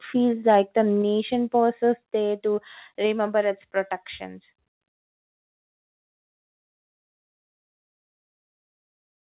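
From 0.48 to 0.6 s the loudest peaks go flat and harsh. This is microphone overload. The input likely ran about 2 dB past the converter's limit. A few percent of samples lose their tops, which adds a brittle crackle to that speech.

At 1.02 s, just before "pauses there", the level drops by about 3 dB. Voice and background fall together. At 2.04 s it drops again, by about 2 dB. This is the microphone volume being stepped down, likely by the call software reacting to the earlier overload. The sound, band-limited to 4 kHz, fits a G.711 call path.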